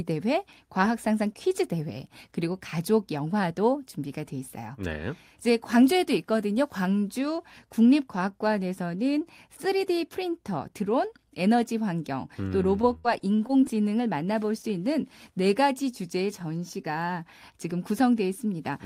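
From 12.81 to 13.64 s the speech turns choppy and robotic, with pieces dropping out. This is repeated packet loss: eight gaps, the longest 58 ms, each patched by stretching the preceding sound, so about 19 percent of that stretch is filled-in audio.

At 16.82 to 16.86 s a brief smear interrupts the speech. This is a short concealed packet loss: about 20 ms of audio arrived too late to play, and the receiver covered the hole by extending what came before, then blended back in.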